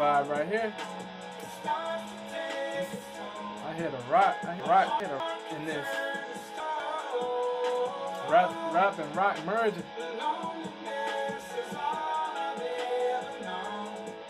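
From 4.6 to 5.2 s the audio has chunks out of order: one 200 ms block was delivered late and plays two blocks after its proper place, so three blocks are reshuffled. From 6.6 to 7.0 s a block arrives one position late, swapping two neighbours. Nothing is missing, but each spot sounds briefly jumbled, with the sound stepping backward across hard joins.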